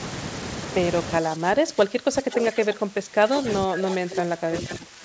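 Likely speech suppressed in double talk: the echo canceller, unable to separate this talker from far-side audio, turns the voice down by up to about 20 dB from 1.21 to 3.45 s and again from 3.64 s to the end. A likely echo leak then lets the loudspeaker's pickup back through, so a 492 ms delayed copy sits roughly 10 to 15 dB under the voice at 3.81 s, 4.16 s and 4.57 to 4.74 s.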